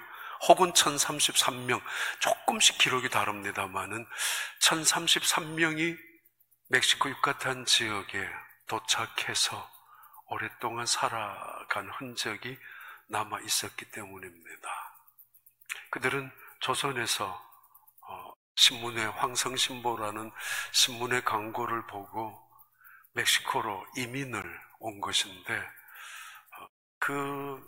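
At 24.42 s there is a block of digital silence: for about 17 ms the sound drops out, likely because the output buffer was not filled in time. The hard cut and restart leave a short hole. On the waveform it shows as a flat line. The spectrogram shows a thin empty vertical stripe.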